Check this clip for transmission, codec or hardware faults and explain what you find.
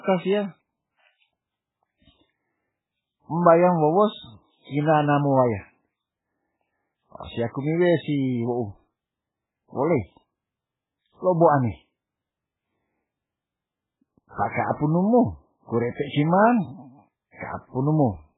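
One fault runs through the whole speech clip. From start to finish the audio sounds heavily watery and swirly, with nothing above 3.8 kHz, so s sounds lose their hiss and attacks smear. The likely cause is MP3 compression at a bitrate consistent with about 8 kbps. With so few bits, the encoder cuts the treble at a fixed frequency and zeroes weak frequency lines, which flicker on and off from frame to frame.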